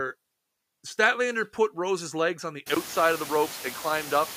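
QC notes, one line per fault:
Throughout: noise suppressor artifacts. The suppressor pulls steady noise down by about 15 dB, frame by frame. The background dips in the gaps and comes back up under the speech. After about 2.5 s the room noise climbs by about 25 dB to sit about 16 dB under the speech. The suppressor then works harder.
2.75 s to end: input switched to a poorer device. Right after "legs on the" there is a 20 ms gap. Then the tone changes abruptly. The new device passes a narrower band, so the speech sounds duller and boxier than before. The level stays roughly the same. The new device adds its own faint noise floor, far below the speech. The likely cause is the system changing to another microphone or to a headset's call profile mid-recording.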